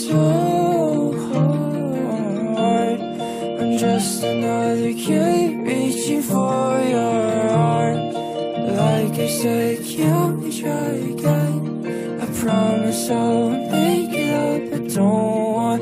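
No dropouts, clicks, distortion or other faults turn up anywhere in the clip.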